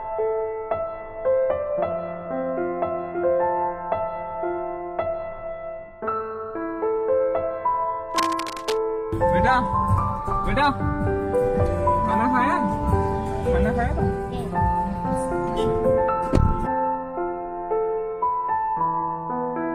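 From 8.11 to 8.77 s, a fairly loud scratching rustle sits over the sound: cable scratch noise, likely from a worn cable or connector shifting its contact.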